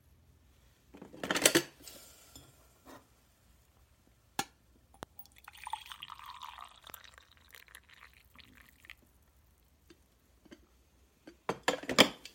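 At 5.03 to 5.05 s, a loud pop cuts through the sound. It is a single sharp crack, standing well above the level around it. A second loud pop follows at 6.90 to 6.92 s, a little softer but still clearly on top. The sound carries on beneath both. Each pop is likely a brief electrical pulse, such as a switch, plug or static discharge, added to the signal and shaped by the circuits after it.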